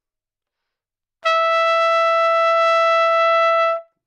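No technical faults can be heard anywhere in the recording.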